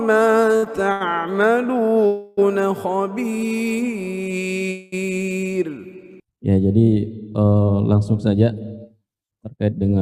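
From 0.53 to 1.02 s, repeated stalls (stutter): four short holds, the longest 81 ms, as late packets keep emptying the jitter buffer, so the sound drags in small hitches rather than one long stop. At 2.06 to 2.39 s and 4.71 to 4.94 s, a call audio freeze: the last sound is held and fades for 310 ms and then 214 ms, likely from packets held up in transit, before resuming without loss and never dropping to silence.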